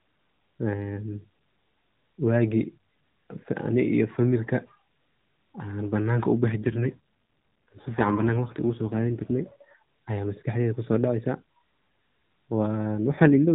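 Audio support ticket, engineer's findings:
AMR rate drop, 6.50–9.78 s and 12.98–13.51 s: speech turns rougher and more synthetic, with the same narrow band and no gap. The sound fits the AMR-NB codec stepping down from 12.2 to 5.9 kbps, trading speech bits for error protection on a weak radio link.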